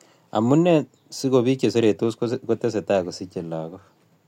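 From 0.26 s to 4.20 s the speech carries clock slip clicks. Faint, even ticks arrive about every 0.2 s, some twenty in all. They sit in the sound itself, clearest on louder passages, and vanish in pauses. The likely cause is two devices running on separate, unsynchronised clocks. Their rates differ by around 100 ppm. Each time the drift builds to a whole sample, one sample is dropped or repeated, leaving a tiny step.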